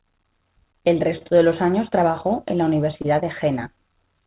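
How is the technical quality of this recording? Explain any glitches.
The speech has two kinds of timing glitch: a steady drift between the two ends' clocks, and two brief stalls where a packet showed up late. It all comes through a call path with nothing above 4 kHz, which fits a G.711 A-law connection.

Clock drift between sender and receiver runs through the whole recording. The sending side's clock is running about 2 percent slow compared with the receiver's, so the jitter buffer keeps draining. To keep playback going, the receiver repeats tiny slivers of sound. You hear that as small hitches and a slightly uneven rhythm that keep coming back at irregular points across the clip, rather than one obvious dropout.

There's a short stall from a late packet at 1.18 to 1.23 s and another at 3.02 to 3.06 s. Each time the buffer ran dry because the next packet wasn't there yet. The receiver held the last bit of sound for about 25 ms the first time and 20 ms the second, then picked up exactly where it left off. 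Nothing is lost, but a sound hangs on a beat too long, with a faint buzzy smear.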